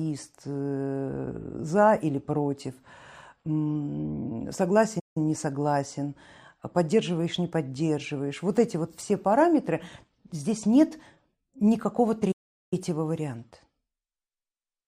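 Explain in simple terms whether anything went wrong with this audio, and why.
The player most likely ran short of incoming data or was briefly held up, so it had nothing to send to the speakers. That is a playback stall: the speech cuts to silence mid-flow and then carries on. It happens twice, from 4.99 to 5.17 s, a gap of about 0.16 s just before "не согласен поддерживаешь не", and from 12.31 to 12.73 s, a longer gap of about 0.4 s right after "параметры здесь нет никакого".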